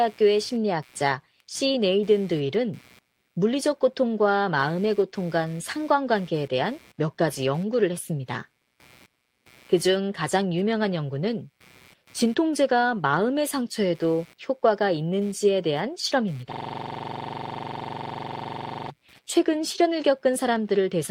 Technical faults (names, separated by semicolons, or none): computer activity noise; system hang loop